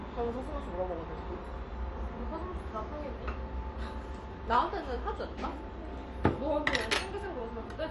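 From start to finish the top end stops near 11.3 kHz and sounds dull and gurgly, likely MP2 compression starved of bits, which fits roughly 48 kbps.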